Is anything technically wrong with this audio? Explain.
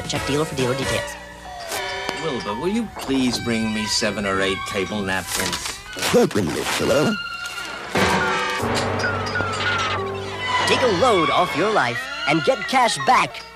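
Yes, there are two loud pops: one at 2.09 s and a second at 9.41 s, each lasting about 20 ms. The first jumps something like 20 dB above the surrounding sound, the second a bit less, around 15 dB. Each is a single sharp click-thump sitting on top of the audio, which carries straight on underneath. The likely cause is a brief voltage spike, from a plug, switch, static discharge or a driver hiccup, getting into the signal path.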